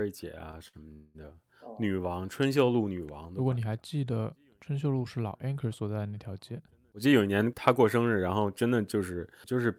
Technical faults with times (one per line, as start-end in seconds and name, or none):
0.68-0.75 short stall from a late packet
0.93-1.16 call audio freeze
6.52-9.11 jitter buffer speed-up